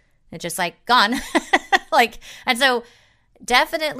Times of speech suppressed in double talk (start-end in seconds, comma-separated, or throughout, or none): none